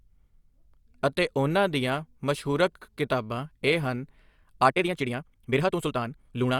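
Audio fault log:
4.66–6.59 s, time-stretched section: from 4.66 s to the end, the speech suddenly races ahead at about 1.73 times its earlier pace, yet the pitch stays where it was, so it comes across as rushed rather than higher. This is likely software squeezing the final stretch to fit a shorter length, keeping pitch steady by cutting out short slices of the waveform and butting the remaining pieces together, which leaves a hurried texture.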